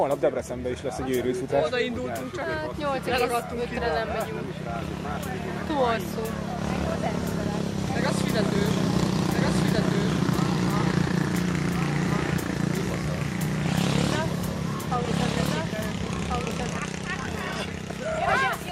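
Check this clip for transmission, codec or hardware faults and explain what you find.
One fault stands out: a doubled audio track from 8.56 s to 16.78 s. In that stretch every sound returns about one and a half seconds later as a second, clean, full-band copy roughly 5 dB quieter, with no decay or room colour, cutting in and out abruptly at each end. The likely cause is the same signal being captured again through a slower path, or an edit leaving two copies overlapping out of step.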